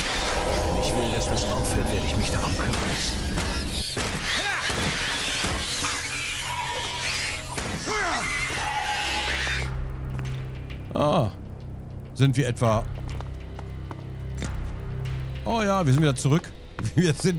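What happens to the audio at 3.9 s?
At 3.9 s the resampler restarted on every block, and this runs through the whole clip. Each 50 ms block was upsampled on its own, likely from 24 kHz to 48 kHz, leaving a small error at every edge. That is heard as ticks at 20 Hz, a buzz under the sound.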